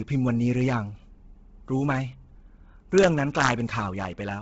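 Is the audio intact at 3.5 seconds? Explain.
No. The moment falls at the tail of an integer overflow running from about 3.40 to 3.49 s. Peaks there exceed the largest value the integer format can hold by about 2 dB, and instead of being limited they wrap to the opposite sign, jumping across the full range. That turns each over-limit peak into a violent crack, much harsher and sharper than ordinary clipping, so the speech at this point is broken by abrupt discontinuities.

The same stretch also carries damage present across the whole clip: nothing remains above about 7.7 kHz, and what is left has a heavy breathy, grainy edge where zeroed upper spectrum has been refilled with noise. This is likely Bluetooth LC3 compression at a low bitrate, which fits around 16 kbps with 10 ms transform frames, the rate being too low to code the upper band properly.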